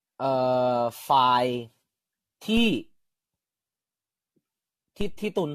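The speech has likely passed through repeated lossy encoding, generation loss from being decoded and re-encoded around half a dozen times or more. Each pass requantised the signal on a shifted frame grid, so the errors piled up. The result, present from start to finish, is a swirly, hollow, smeared texture, softened consonant attacks, and nothing above 14 kHz. The character points to AAC-LC at roughly 64 kbit/s, though it sounds worse than that rate alone would give.

At 5.01 s the waveform's zero line jumps abruptly, a DC step of the kind a converter recalibrating or an offset input being switched in would cause. The shifted baseline then drains away through a high-pass around 2 Hz rather than holding. It is heard as a single low thump or click, while the sound carries on unchanged through it.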